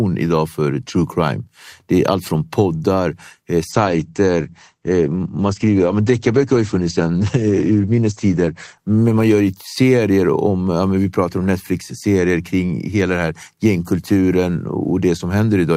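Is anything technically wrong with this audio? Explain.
Yes. There is a call bitrate drop from 3.72 s to 10.55 s. The audio band narrows from about 20 kHz to 8 kHz and the coding turns coarse, which fits the encoder being pushed from roughly 64 kbps down to about 14 kbps after the call's bandwidth estimate fell. The speech sounds muffled and somewhat rough and watery, lowest for about 5.0 s, before the full bandwidth and clarity return.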